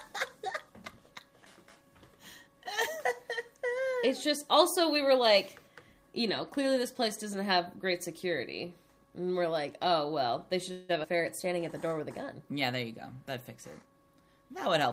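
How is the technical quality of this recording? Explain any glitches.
The recording has four network-related glitches, all in its last few seconds.

At 10.71 s there is a call audio freeze lasting until 10.91 s. The last sound is stretched into a fading buzz or hiss for about 175 ms. The likely cause is late packets leaving the jitter buffer empty, so the receiver had to fill in. Nothing is lost. The audio resumes where it stopped, but now runs 175 ms later.

At 11.03 to 11.06 s there is a skip ahead. Roughly 70 ms of audio is missing. The sides of the jump are joined almost directly, with only a tiny fill. A stretch was dropped, either on the way or by the buffer when it overflowed. This removes about 50 ms of the delay built up by the freeze.

From 11.12 to 11.95 s there is a jitter buffer slow-down. Playback runs at 93% speed while pitch stays the same. The receiver repeated single pitch periods and bits of pauses again and again. 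That added 65 ms to rebuild its reserve. Sounds in this stretch are drawn out.

From 13.82 to 14.88 s there is a jitter buffer speed-up. Playback runs at 116% speed, again at unchanged pitch. The buffer held too much audio, so the receiver cut many short pieces of a pitch period or a few. Roughly 200 ms was removed in total. The result sounds hurried right up to the end.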